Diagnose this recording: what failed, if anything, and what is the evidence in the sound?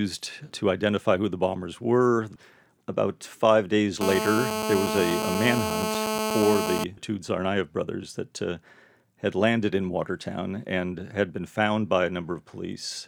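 The failure is in the analogue wiring: a nearby 2G handset on an active call is radiating into the audio circuit, which rectifies its transmit pulses into GSM phone buzz. From 4.01 s to 6.84 s a hard, raspy buzz at about 217 Hz with a dense stack of harmonics sits under the speech at about 2 dB below it. The buzz holds nearly steady, as expected during a call, and is unrelated to the speech.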